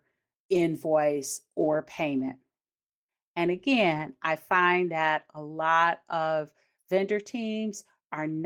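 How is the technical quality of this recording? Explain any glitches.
The speech carries three short patches where lost packets were rebuilt from error correction, at 0.53 to 0.63 s, 2.19 to 2.29 s, and 3.93 to 4.03 s, the last just before "I find that a". In each, a few packets went missing, and the decoder played the low-bitrate backup copies carried in the following packets. There is no dropout, but each patch sounds briefly grainy and noisier. The waveform stays continuous, and a spectrogram shows smeared, noisier detail over those spans.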